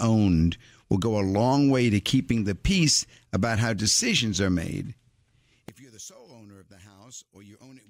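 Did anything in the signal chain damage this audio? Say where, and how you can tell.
Yes. From 5.69 s to 7.90 s the speech collapses by about 25 dB into a faint residue as its centred content cancels. This is one channel inverted, likely from reversed polarity in the analogue wiring, so a mono sum subtracts the near-identical channels.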